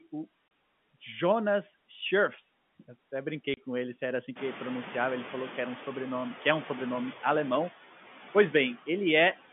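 Noise suppressor artifacts run through the whole speech clip. The suppressor pulls down bands it judges to be steady noise by about 12 dB, frame by frame. The background dips between phrases and swells under them. This is clearer once the room noise rises around 4.5 s.

Packet loss filled with silence cuts the audio from 0.48 to 0.51 s and again from 3.54 to 3.57 s. Each 30 ms gap fits one lost packet that the receiver replaced with silence, so the sound drops out abruptly with hard edges.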